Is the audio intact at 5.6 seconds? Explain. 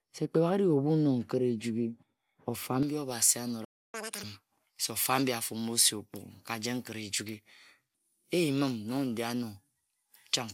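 No. At 5.6 s the speech sits inside a stretch of pre-emphasis left on, running from 2.83 s to the end. The treble boost was never undone, so 10 kHz stands about 11 dB above 1 kHz, which fits a J.17 curve, leaving it thin, bright and hissy on sibilants.

Generation loss is also present there, as it is throughout the clip. The sound has a swirly, hollow smear, softened attacks and nothing above 18 kHz, likely from around seven passes through MP2 at about 128 kbit/s, each pass adding fresh quantisation damage.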